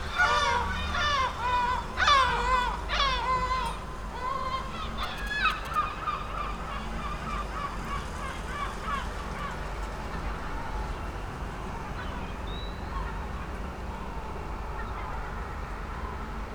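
GSM signalling bursts run from 5.03 to 5.76 s: a nearby 2G phone exchanging brief control traffic, rectified by the audio circuit into a galloping cluster of short buzzes at about 217 Hz, sitting roughly 15 dB below the sound.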